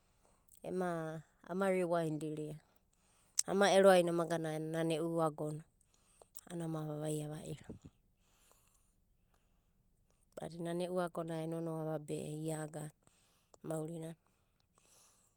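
Nothing in the speech stood out as a technical problem on listening.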